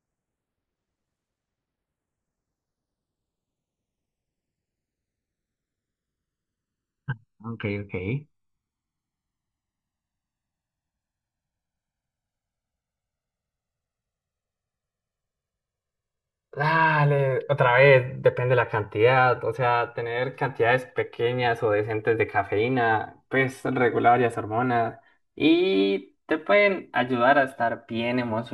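Channels drifting apart runs through the whole of this speech recording: the left and right sides were captured on devices with independent clocks, differing by something like 100 ppm, so the offset between them grows steadily to around 3 ms by the end. When the two sides are summed to mono, that changing delay produces comb-filter notches that glide slowly across the spectrum, giving the speech a gradual, sweeping flanged colour.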